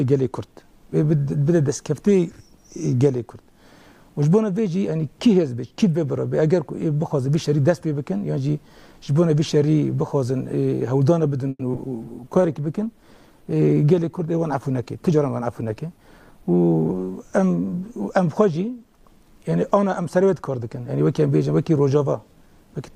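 Repeated packet loss (robotic sound) runs from 11.49 to 11.87 s. Audio went missing in four separate holes within that 0.38 s. The receiver filled each hole by extending the last stretch of sound, covering about 140 ms in total, and left another 60 ms as silence. The longest hole was 110 ms. Because about 37% of the span is concealment, it sounds choppy, with pieces dropping out.

A call bitrate drop follows at 12.03 s and lasts until 17.75 s. The sender's bandwidth estimate fell, so the encoder was forced to spend far fewer bits. The change in quality fits a fall from 128 kbps to about 24 kbps, held at its lowest for about 3.7 s. At that rate the coding turns coarse and the upper frequencies are trimmed, so the audio sounds rough, watery and muffled until quality returns near 17.75 s.

A jitter buffer speed-up occurs inside that degraded stretch, from 14.74 to 15.99 s. The receive buffer was holding more audio than its target. 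To shrink the delay, it repeatedly cut out short pitch-period-sized slices, removing roughly a tenth of a second in all. The sound plays at about 108% speed without any change in pitch, so this passage comes across as slightly hurried and rushed.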